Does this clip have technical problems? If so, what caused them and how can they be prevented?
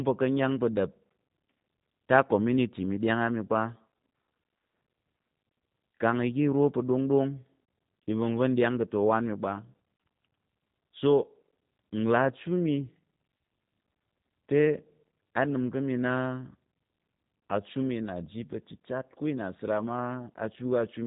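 Yes. The speech carries G.729 codec damage for the whole clip. Nothing above 3.8 kHz survives, so it sounds muffled. The voice is rough and synthetic, which fits an 8 kbit/s G.729A stream rebuilding it from a filter and a few pulses per frame. To prevent it, use a wideband codec such as G.722 or Opus.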